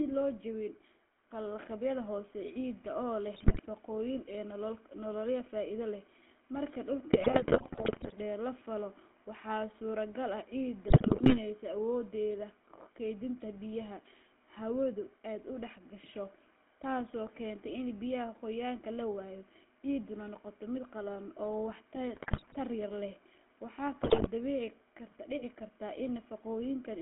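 Throughout, the GSM full-rate codec leaves the speech buzzy and gravelly inside a 250 Hz to 3.4 kHz band, a coarse pulse-excited roughness rather than the watery swirl of modern codecs. GSM bit errors then corrupt decoded frames at 3.34–3.61, 7.13–8.13, 10.88–11.40, 22.14–22.57 and 24.02–24.28 s, bursting into squawks, pops and gargling instead of the silent gaps of dropped packets.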